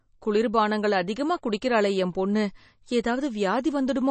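Speech throughout, with plainly audible MP3 compression across the whole clip: nothing sounds above 8.3 kHz, and weak spectral detail flickers in and out, giving a watery, swirly texture. The hard treble cut and the flicker likely come from a starved low bitrate, around 32 kbps.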